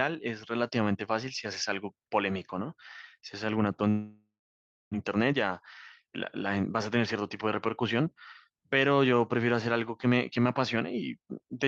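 At 3.89 s the sound breaks up. What's left of the last bit smears into a fading buzz, then it goes quiet until about 4.96 s, roughly 0.6 s of which is plain silence. That's most likely a long network dropout. Packets stopped arriving, the receiver stretched the last audio as far as it could, then gave up, and a chunk of the stream was never played at all.

Right after that the jitter buffer speed-up kicks in. From 5.15 to 5.63 s playback runs about 110% fast, and from 6.04 to 10.77 s about 107%. The delayed audio showed up in a pile, leaving the buffer holding around 0.4 s more than it wants, so the receiver kept snipping out pitch-period-sized slivers to catch up, about 50 ms in the first stretch and around 0.4 s in the second. The pitch stays put, but the speech sounds noticeably hurried. All of it comes through the Opus call path, with the top end capped near 12 kHz.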